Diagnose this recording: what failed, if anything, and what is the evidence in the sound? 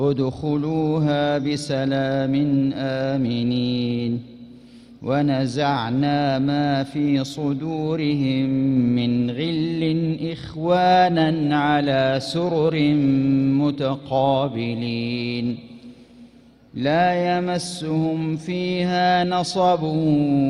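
Nothing failed; no fault can be heard anywhere.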